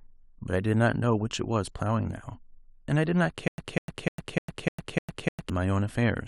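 From 3.48 s to 5.50 s the speech breaks into a stutter with silent gaps. One 198 ms fragment plays seven times, each followed by 103 ms of digital silence, on a steady 301 ms cycle. A stalled stream likely replayed its last buffer, and the intended audio is lost.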